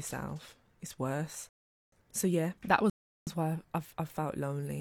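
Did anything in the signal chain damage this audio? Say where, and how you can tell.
Yes, two rebuffering stalls at the playback stage: silence from 1.49 to 1.92 s and from 2.90 to 3.27 s, adding about 0.43 and 0.37 s. The player starved for data and paused. Unlike a packet-loss dropout, speech resumes exactly where it stopped, with nothing skipped.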